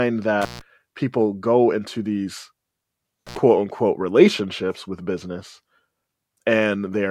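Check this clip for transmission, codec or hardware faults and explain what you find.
An intermittent contact fault breaks the signal path twice in this speech. A loose plug or cable briefly loses its connection, so the signal drops out, and the making and breaking of the contact adds crackle at each edge. The first break runs from 0.42 to 0.61 s, with the line open for about 148 ms, just before "people go into these". The second runs from 3.27 to 3.37 s, open for about 63 ms, just before "unquote relationships with business".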